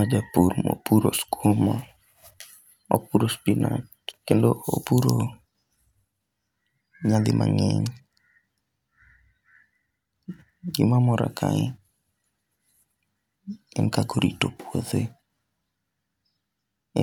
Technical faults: none

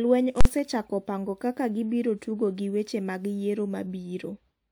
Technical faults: invalid numbers at full scale

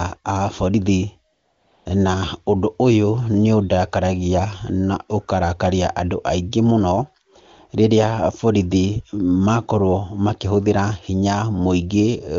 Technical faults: AMR comfort noise

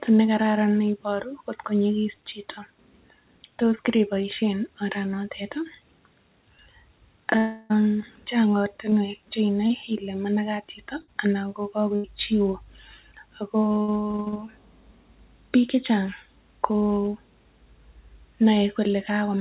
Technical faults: long network dropout; short concealed packet loss; burst of packet loss

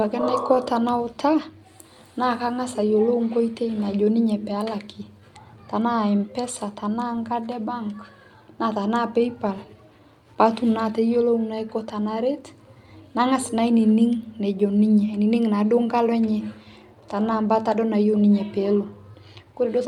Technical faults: clock drift between sender and receiver; repeated timing corrections

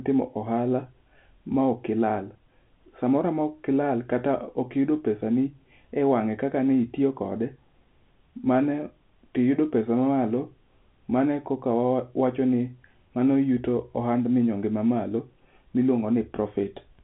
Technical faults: none

